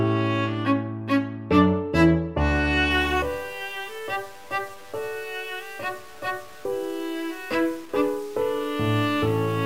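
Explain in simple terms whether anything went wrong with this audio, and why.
From 2.91 s to the end, the sound turns grainy and gritty, likely from low bit depth without dither. Unlike steady hiss, the grit rises and falls with the sound itself.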